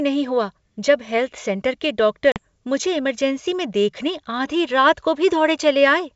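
At 2.32 s, right after "सेंटर के", the speech breaks off in a hard-edged hole of about 40 ms, roughly two packets' worth, before resuming on "मुझे इमरजेंसी में देखने" by 2.41 s. This is packet loss on an ADPCM call: the gap is filled with plain silence, and the receiving decoder's adaptive predictor and step size no longer match the sender's. The speech therefore comes back slightly distorted, with a roughness that settles over the next few tens of milliseconds. A concealed loss would instead be smoothed over or repeat earlier sound. The wideband G.722 coding keeps the returning speech bright.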